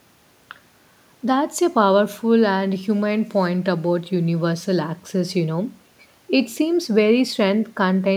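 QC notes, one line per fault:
No faults heard anywhere in the speech. Nothing in the recording calls for a timestamped entry.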